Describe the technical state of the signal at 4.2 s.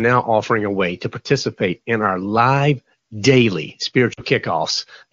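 At 4.2 s you're right at the end of a short patch of lost AMR speech frames, running from about 4.13 to 4.21 s just after "in our live daily". The decoder bridges the gap by repeating its last good settings at falling gain, so the sound smears briefly and dips. The gap fits two dropped 20 ms frames.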